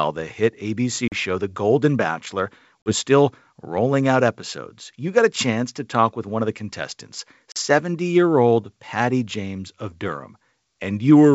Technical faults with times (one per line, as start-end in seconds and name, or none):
1.08-1.12 packet loss on an ADPCM call
2.82-2.93 packet loss on an ADPCM call
7.52-7.58 packet loss on an ADPCM call